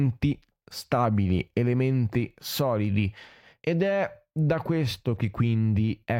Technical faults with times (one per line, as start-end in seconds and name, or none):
0.18-5.80 clock slip clicks